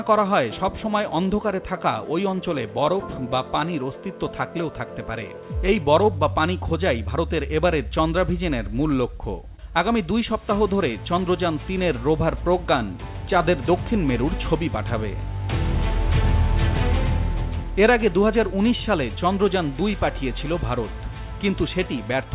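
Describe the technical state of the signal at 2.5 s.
At 2.5 s the signal is intact, with no dropout, glitch or distortion, only the narrowband character of the call path, whose content stops at about 4 kHz, which fits a G.711 telephone codec.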